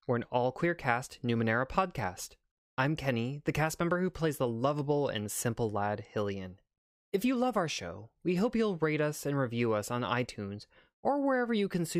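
No technical faults can be heard anywhere in this speech recording. There is nothing in it that needs a time-stamped description.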